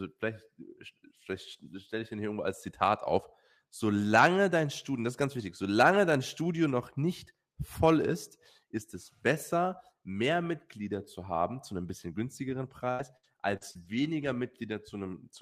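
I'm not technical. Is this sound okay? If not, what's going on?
No. From 12.49 to 14.25 s, right after "haben zu einem bisschen", the speech turns choppy and robotic: repeated packet loss. Six small pieces went missing, the longest 77 ms, and each was patched by stretching the sound just before it.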